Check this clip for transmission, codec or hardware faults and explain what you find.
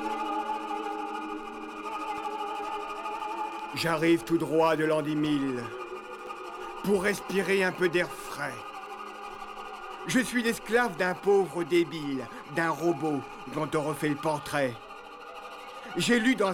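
One hardware-path fault is present: periodic USB or driver dropouts from 2.18 s to 9.35 s. Roughly every 1.02 s, a brief stall in the USB bus or audio driver drops a couple of milliseconds of audio and leaves silence, producing evenly spaced ticks over the sound.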